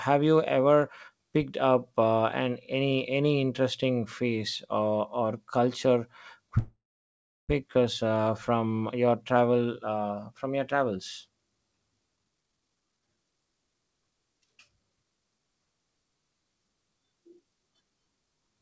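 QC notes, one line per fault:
6.58–7.51 s, call audio freeze: the last sound carries on as a brief fading buzz, then about 0.72 s of silence, and the audio resumes where it stopped. Nothing is skipped, unlike a dropout. This is likely late packets emptying the jitter buffer, adding 908 ms of delay.
12.16–15.39 s, jitter buffer speed-up: the speech runs at 128% speed with its pitch unchanged and sounds hurried. The receiver snips short pitch-period slices, roughly a second in total, to drain the built-up buffer. A resampling speed change would raise the pitch, and here it stays the same. The G.722 call band, empty above 8 kHz, is unchanged through this stretch.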